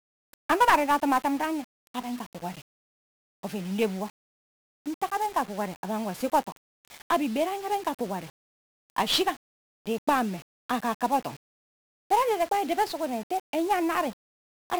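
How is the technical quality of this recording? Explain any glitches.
The recording is heavily degraded by a single fault that runs through the whole clip: 1-bit DFPWM compression. From start to finish, each sample is reduced to one bit that nudges an adaptive level up or down, so the waveform is only roughly traced. That leaves strong broadband quantisation noise, making the speech fuzzy and crackly with its treble buried in hiss. The rate points to one bit per sample at about 48 kHz. Unlike low-bitrate perceptual codecs, it has no swirling or watery artefacts, only a constant gritty noise bed.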